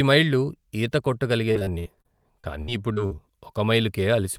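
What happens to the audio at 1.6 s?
At 1.6 s you're inside a stretch of repeated packet loss (robotic sound) that runs from about 1.51 to 3.20 s, starting right after "మైళ్ళు ఈత". The speech keeps dropping out in short holes, around ten of them, the longest about 68 ms. Each hole gets patched by stretching the last bit of sound, so roughly a fifth of that span is filler. That leaves it choppy, with pieces of speech missing.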